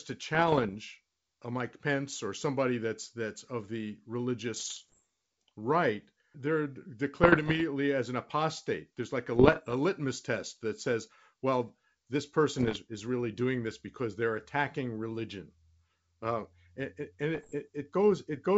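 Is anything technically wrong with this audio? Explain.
Yes. Six short stretches of speech carry bit errors on an ADPCM link, at 0.35 to 0.76 s, 4.56 to 5.01 s, 7.23 to 7.61 s, 9.36 to 9.74 s, 12.58 to 12.78 s and 17.35 to 17.54 s. Flipped bits, around one in a hundred at worst, corrupt the decoder's adaptive step size and prediction, so each error rings on briefly. The result is pops, rough crackly bursts and momentary jumps in level, heard over the otherwise clean wideband G.722 coding at 64 kbit/s.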